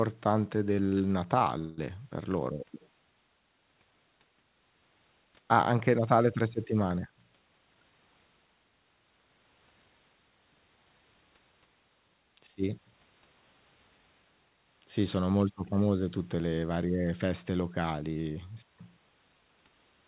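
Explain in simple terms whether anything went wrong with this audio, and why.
Yes, twice, both early in the clip and both caused by audio data arriving late over the call connection.

First, a short stall from a late packet, from 1.39 to 1.43 s. One small chunk of audio arrived late, and the receiving end had nothing ready to play. To cover the gap, it stretched the last bit of sound by about 16 ms, then carried on from the same point. Nothing is lost, but the speech just before "per loro" sounds briefly held or slightly buzzy.

Second, a call audio freeze, from 1.59 to 1.79 s. This was likely caused by several chunks being held up on the way, so the receiver's waiting supply ran dry for longer. It kept the last sound going for about 190 ms as a fading buzz, never going fully silent. When the audio caught up, it resumed where it had paused, just before "per loro" again. The effect is an audible hiccup that adds a gap to the speech while losing no words.

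Throughout, the sound also has the muffled quality of a standard phone call, with nothing above about 4 kHz.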